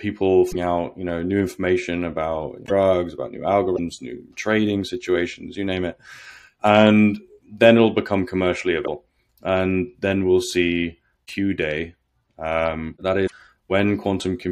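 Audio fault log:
0.51 to 0.56 s, 2.65 to 2.71 s, 3.75 to 3.79 s, 8.84 to 8.88 s and 13.26 to 13.32 s: broken MP3 bit reservoir. Each event is a short glitch of about 40 to 60 ms. The sound skips ahead and smears into a brief chirp, noisy burst or short hole. The length matches about two MP3 frames of about 26 ms. The likely cause is lost frames. The next frames then read borrowed reservoir data from the wrong place, so they decode into garbage until the stream resyncs.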